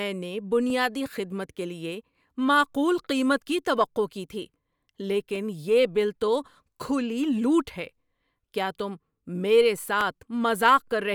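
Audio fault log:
0.70–10.01 s, clock drift buffer slips: a short click recurs every 2.33 s, about five in all, each where a small block of samples is dropped or repeated. The strict spacing, unlike random dropouts, points to a likely clock mismatch near 150 ppm between two devices.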